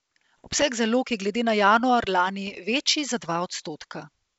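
Between 0.38 and 0.63 s, just before "zalog je glede na", and again from 2.47 to 2.59 s, between "glede na januar lani" and "večji za dva", the speech breaks into pops and rough bursts with brief level jumps. These are bit errors on an ADPCM link, at a rate well under one percent. Each flipped bit knocks the decoder's step size and predictor off track, so the damage rings on for a few milliseconds instead of leaving a clean gap as packet loss would. The G.722 wideband coding around the bursts keeps its clear top end up to 7 kHz.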